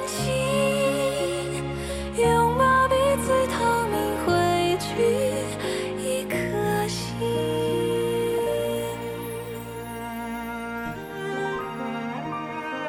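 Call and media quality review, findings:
Mains buzz, 10.09–12.69 s: steady raspy 60 Hz buzz, well below the signal. Switching spikes twice per cycle from a dimmer, rectifier or unshielded lead; harmonics climb into kHz.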